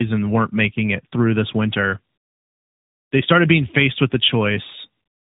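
Throughout the speech, the sound is rough, muffled and warbly. This is tandem speech coding. The call passed through two speech coders in a row, likely AMR-NB at both ends with a G.711 A-law link between them. Each border decoded and re-encoded the audio. The second coder worked on the first one's errors and added its own. Nothing remains above 3.8 kHz. The rates heard fit roughly 12.2 and 10.2 kbit/s.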